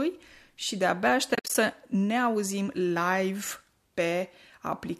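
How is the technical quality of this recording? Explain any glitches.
There's one real glitch, a burst of AAC frame loss with muting, sitting in speech that carries a light coding texture, likely from low-delay AAC at something like 64 kbps.

Between 1.35 and 1.55 s, chunks of audio adding up to 130 ms drop out across a 200 ms stretch, the longest gap around 70 ms. The decoder zeroes each missing frame, and the overlapping windows fade the sound down and back up, so you hear soft-edged holes.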